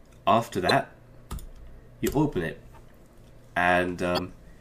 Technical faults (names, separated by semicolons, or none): damaged data in a compressed stream